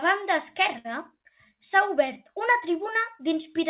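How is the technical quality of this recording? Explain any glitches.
The speech carries one timing glitch, and the whole clip has the narrow telephone bandwidth of a call path, with nothing above 4 kHz, consistent with G.711 mu-law at 64 kbps.

From 0.78 to 0.86 s there is a short stall from a late packet. The jitter buffer ran dry, so the receiver stretched the preceding sound for about 64 ms until the packet arrived. Nothing is lost, but that sound lingers unnaturally, and everything after it sits 64 ms later.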